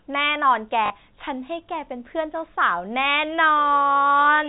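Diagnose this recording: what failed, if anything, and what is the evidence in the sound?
The network dropped a couple of packets. At 0.86 s there's a brief robotic stutter lasting about 40 ms, ending at 0.90 s, with a buzz under it. That's packet loss with the last packet repeated: the receiver replayed the last good chunk until fresh audio arrived. The 40 ms gap fits two lost 20 ms packets, giving that roughly 50 Hz buzz. The G.711 telephone band is still there underneath.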